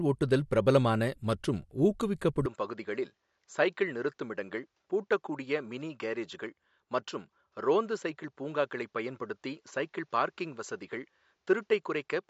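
At 2.46 s the speech changes character and stays that way to the end. It turns duller and boxy. Nothing remains above 7.6 kHz, so the top of the consonants loses its air. The level drops by about 5 dB. A faint new background noise sits far below the speech. There is no gap at the change. The likely cause is an input switched to a poorer device partway through recording.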